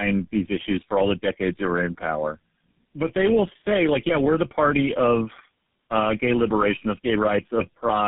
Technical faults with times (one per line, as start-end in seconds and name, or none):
0.00-8.08 tandem speech coding